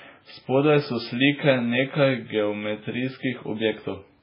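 Throughout this speech recording the sound is dull and watery, with a swirling, metallic quality on s sounds and smeared consonant attacks, and nothing at all is heard above about 5.3 kHz. The likely cause is heavy MP3 compression at a very low bitrate, consistent with around 16 kbps. Starved of bits, the encoder cuts the treble at a fixed frequency and drops weak frequency lines that flicker in and out between frames, producing the swirl and chirps.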